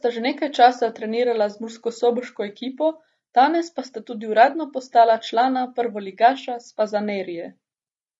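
The speech carries plainly audible low-delay AAC compression from start to finish: voiced sounds come across rough and grainy, with noise filling the gaps between pitch harmonics and a top band that sounds thin or synthetic. The likely cause is AAC-ELD at a bitrate that fits about 32 kbps. Its very short frames smear harmonic detail, which sets it apart from standard AAC, whose artefacts tend to be pre-echo and swirling highs rather than a grainy texture.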